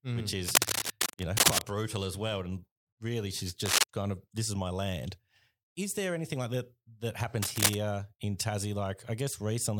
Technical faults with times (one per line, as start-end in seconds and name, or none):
0.48-1.62 cable scratch noise
3.66-3.84 cable scratch noise
7.42-7.75 cable scratch noise